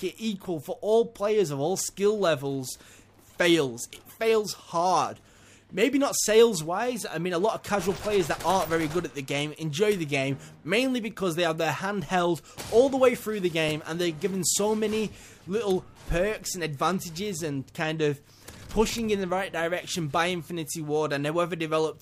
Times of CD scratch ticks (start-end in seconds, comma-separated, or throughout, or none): 13.43-14.21